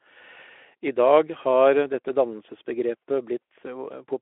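Nothing here needs flagging, as no technical faults turn up anywhere in this speech clip.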